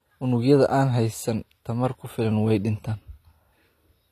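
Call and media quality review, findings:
AAC compression, throughout the speech. Dull, smeared top end with plainly audible codec damage. Nothing above 14 kHz. Likely an AAC-LC encoder starved of bits, which fits a low bitrate around 32 kbps. High bands get dropped or coarsely quantised.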